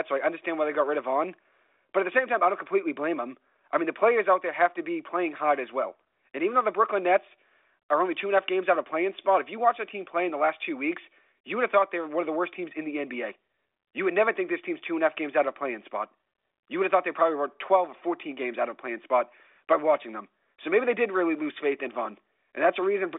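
The speech sits in a telephone band of roughly 300 Hz to 3.7 kHz with nothing above 3.8 kHz, consistent with G.726 ADPCM coding at 40 kbit/s, and no technical faults can be heard.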